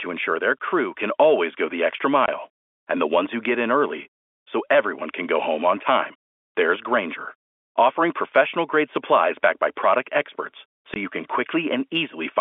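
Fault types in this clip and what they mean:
packet loss filled with silence: two 20 ms silent holes, at 2.26–2.28 s and 10.94–10.96 s, each fitting one lost packet, with hard edges rather than concealment's smeared repeat.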